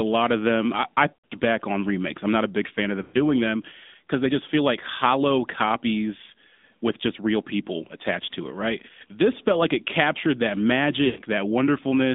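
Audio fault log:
Throughout: AMR narrowband mobile codec. The speech is squeezed into a phone band of about 150 Hz to 3.7 kHz, so it sounds thin and boxed in, with no air above. The codec rebuilds the speech from a vocal-tract model excited by sparse pulses. This leaves a plainly audible buzzy, synthetic edge. That degree of damage fits a mid-rate mode near 10 kbps.
1.14 to 1.33 s, 3.02 to 3.17 s, 11.06 to 11.22 s: lost AMR speech frames. Each time a short run of speech frames is missing, about 140 ms in the first and 120 ms in the others. The decoder fills the gap by repeating its last good pitch and vocal-tract settings at falling gain. The sound smears into a drawn-out warble and sinks toward silence. It then returns weak or rough for a moment.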